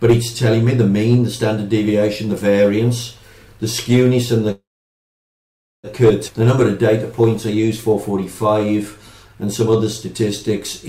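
From 4.51 to 5.87 s the audio stops: the last sound carries on briefly and then fades into about 1.2 s of silence before playback resumes where it left off. This is a call audio freeze, likely from packets delayed in transit draining the jitter buffer. Nothing is lost, but about 1.3 s of extra delay is inserted.

At 6.28 to 6.31 s there is a skip ahead. Roughly a second of audio is discarded, dropped in transit or by the jitter buffer when it overflowed. Playback jumps forward across a join of only a few milliseconds, so the audio on either side is spliced almost directly.

From 7.21 to 10.81 s a jitter buffer slow-down stretches the audio to about 94% speed at unchanged pitch. The receiver repeats short pitch periods and pause fragments to rebuild its reserve, adding 242 ms in total. Sounds come out drawn out.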